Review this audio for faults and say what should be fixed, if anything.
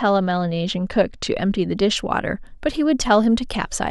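From the start to about 1.97 s there's channel delay causing comb filtering: one side runs a couple of samples late, so the mono sum notches out around 10 kHz and dulls the speech's top end. Worth checking channel alignment before folding down to mono.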